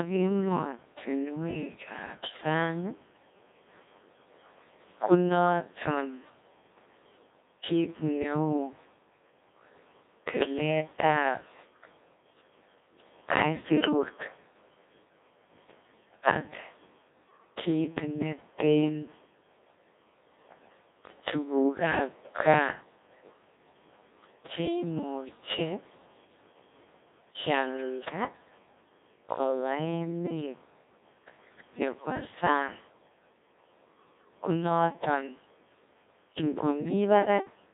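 Codec 2 vocoder throughout: the speech is rebuilt from pitch and spectral envelope with a heavy, robotic buzz, squeezed into 250 Hz–3.7 kHz, at roughly 1.6 kbit/s.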